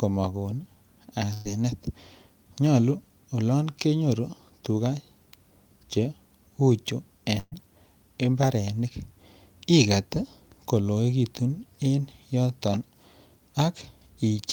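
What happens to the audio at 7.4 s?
At 7.4 s there's a burst of packet loss, running from about 7.39 to 7.55 s. A run of packets never made it in time, so the receiver papered over the hole by stretching the last bit of speech for roughly 126 ms and fading it down, then dropping to about 30 ms of silence. When the speech comes back, around 120 ms of it is simply gone, so you hear a smeared, dying tail and then a jump ahead.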